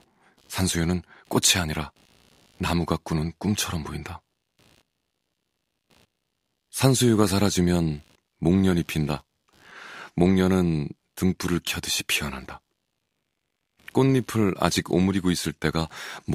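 From start to finish there's computer activity noise under the speech: a faint buzzy chirping, pulsing at something like 70 times a second, sitting roughly 40 dB down. It's processor or graphics load shifting the shared ground, so it tracks the machine, not the talking.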